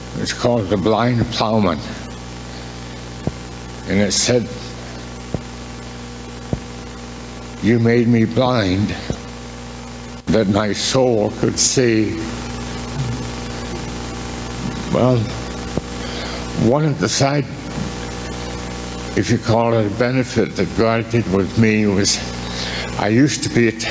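Gain pumping runs through the whole clip. The level swings by about 15 dB. Loud and quiet passages sit unnaturally close together, so the sound feels squashed. The likely cause is input gain set far too high, with a fast limiter or compressor clamping down on each peak. The call processing keeps everything below 8 kHz.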